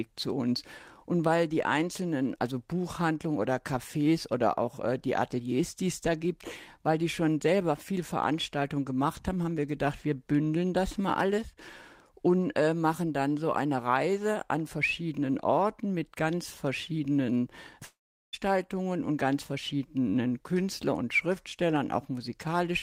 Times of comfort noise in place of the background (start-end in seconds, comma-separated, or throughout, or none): none